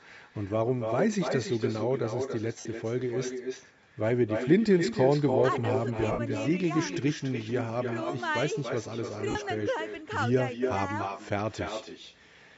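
No echo canceller sits on the far end: the loudspeaker's output leaks back into that microphone and returns after roughly 300 ms, about 6 dB below the direct speech. From the start, every phrase is trailed by a thinner duplicate.

The sound stops around 8 kHz, as expected from call microphone processing; the lossy compression is light.

At 2.60 s, lost LE Audio frames interrupt the Bluetooth link for 52.5 ms, a duration that fits a short run of 7.5 ms LC3 frames. The decoder fills the gap by repeating the last spectrum with scrambled phase, so the speech briefly turns into a noisy smear before it recovers. At 6.12 s the same thing happens for 67.5 ms.

From 8.55 s to 9.59 s, GSM phone buzz comes in. A nearby 2G handset in a call transmits bursts at 217 Hz, and the audio circuitry rectifies that radio energy into a hard, rasping buzz rich in harmonics. It sits about 31 dB below the speech, steady for that second and unrelated to what is being said. 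Within it, at 9.30 s, a third LE Audio dropout of 45 ms adds another brief noisy smear.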